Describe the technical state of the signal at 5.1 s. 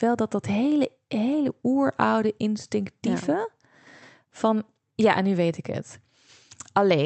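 At 5.1 s the speech comes through intact, with nothing wrong at that moment beyond the ordinary character of the Opus call path it travelled through.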